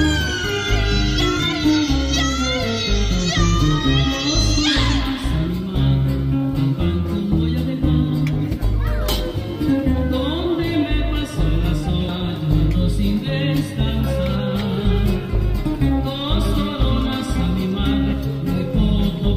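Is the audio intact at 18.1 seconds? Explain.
No. Compressed frames are skipped at 18.11 s: a run of coded frames, probably around five at 23.2 ms each, never reaches playback, so the audio leaps ahead by roughly a tenth of a second. The join is heard as a sudden jump in the audio.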